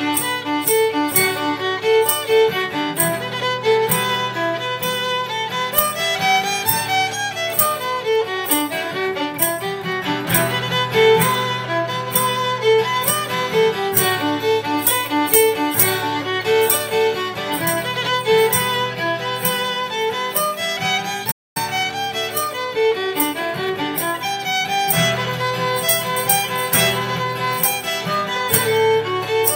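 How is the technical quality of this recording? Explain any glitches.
The recording has one disruption, a playback stall followed by time-compressed catch-up, both a little past the 21-second mark.

At 21.31 s the player likely ran dry of buffered data, or its playback thread was held up, so nothing reached the output until it recovered at 21.57 s. The sound cuts out abruptly in mid-flow, leaving a gap of about a quarter of a second.

From 21.57 s to 23.97 s the player works off the backlog the stall left behind by removing short slices of audio and cross-fading across each join, running at 1.1 times normal speed. Pitch is unchanged, but the sound feels slightly rushed for those 2.4 seconds.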